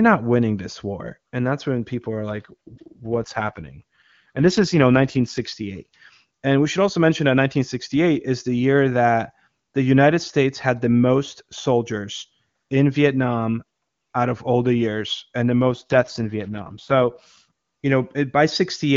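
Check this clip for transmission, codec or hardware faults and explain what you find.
Two stretches of speech turn rough and synthetic: 2.30 to 5.41 s, after "that's when people are", and 15.62 to 17.46 s, after "the years and the". The band and continuity hold. This is an AMR rate drop, which sounds like the wideband coder falling from about 23.85 to about 8.85 kbit/s to protect the link, then recovering.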